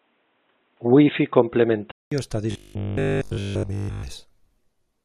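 From the start to 2.12 s the speech is narrow and boxy, with a steady noise bed roughly 45 dB under the signal. The likely cause is an input switched to a poorer device, such as a headset's call profile. At the switch back there is a 200 ms silence, and the sound returns fuller and about 5 dB different in level. On a spectrogram the energy stops at a flat upper ceiling, then a blank gap, then full bandwidth. The waveform steps in level across the gap.

From 2.51 s to 4.03 s the speech becomes a rigid metallic buzz at 50 Hz that only loosely follows the talker. This is robotic sound from repeated short buffers. The same slice is replayed throughout the stretch, which fits a 20 ms buffer, and the fresh audio underneath is likely skipped. A spectrogram shows an evenly spaced comb of harmonics 50 Hz apart. The waveform shows one identical 20 ms shape tiling across the whole section.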